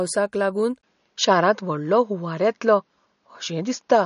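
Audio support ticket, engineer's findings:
MP3 compression, throughout: top end stops at 10.6 kHz, watery swirling on speech and smeared attacks, likely from low-bitrate encoding; damage fits roughly 40 kbps.

Input switched to a poorer device, 0.81 s to end: 20 ms dropout, then band cut at 6.8 kHz, duller tone, level shift of about 5 dB, faint new noise floor; likely a change to a lesser microphone.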